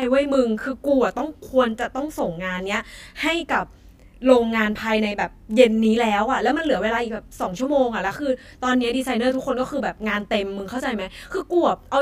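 Channel delay (comb filtering) runs through the whole clip. One channel arrives roughly 20 ms behind the other, and when the two are summed to mono, the content common to both cancels at a series of evenly spaced frequencies, starting near 20 Hz. The result is a fixed comb of notches across the spectrum that stays put regardless of what is said, giving the speech a rough, slightly doubled character.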